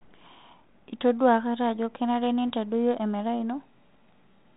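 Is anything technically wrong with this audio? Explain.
Yes. There are bit errors on an ADPCM link at 0.69 s and 2.50 s, the second between "akata ajo kenare" and "emerai ino". Each flipped bit throws off the decoder's step size and predictor, so the error rings on for a few milliseconds as a short pop and rough burst with a brief level jump. The error rate is low, a fraction of a percent. The telephone-band ADPCM coding underneath, with nothing above 4 kHz and only light coding roughness, fits G.726 at 32 kbit/s.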